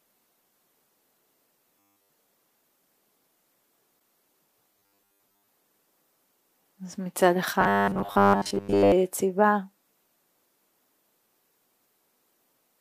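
Robotic sound from repeated short buffers appears first between 1.79 and 2.10 s. The sound becomes a rigid, metallic buzz at 100 Hz. The likely cause is that fresh audio stopped arriving in time, so the playback repeated a 10 ms buffer in place of nearly all of the real signal.

Damaged data in a compressed stream follows at 3.96 to 3.99 s as a brief fault. Corrupt frames made the decoder lose sync and jump to the next frame header it could read.

The robotic buzz returns at 4.75 to 5.48 s and again at 7.61 to 8.92 s, at the same 100 Hz pitch. Repeated buffers likely replace roughly 70% of the audio in each stretch, so the sound still loosely follows its original shape.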